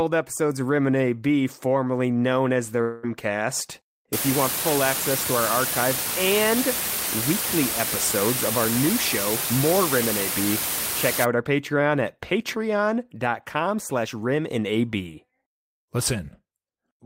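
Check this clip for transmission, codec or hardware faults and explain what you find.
There are two faults in this speech clip.

Right after "formerly known as the", from 2.81 to 3.05 s, the sound stretches into a fading buzz for about 0.22 s, then resumes with a chunk missing. That's likely a long network dropout, where the receiver papered over lost packets by extending the last sound.

From 4.13 to 11.25 s there's low bit depth with dither. The signal is rounded to about 3 bits with dither added first, so the rounding error turns into a steady, even hiss instead of distortion. Here that hiss sits roughly as loud as the speech.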